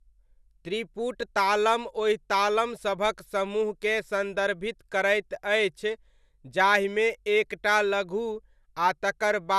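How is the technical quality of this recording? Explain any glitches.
The technical quality is degraded throughout the speech. It sounds swirly and hollow, with nothing above 12.6 kHz and softened consonant attacks. This is likely generation loss from about three lossy MP2-style encodes near 128 kbit/s, each re-quantising on a shifted frame grid. A single encode at that rate wouldn't smear this much.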